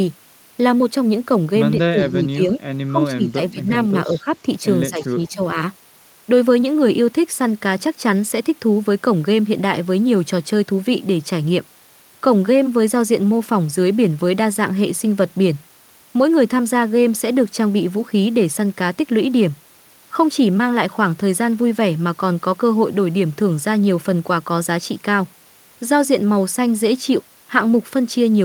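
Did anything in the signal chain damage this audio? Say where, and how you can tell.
Yes, in call processing. The speech dips in pieces at 1.76–2.39, 2.56–2.61, 2.87–3.69, 3.92–4.31 and 4.9–5.56 s, falling by around 10 to 15 dB. This is likely speech suppressed in double talk. The echo canceller couldn't separate this talker from loudspeaker echo during overlap, so it attenuated both.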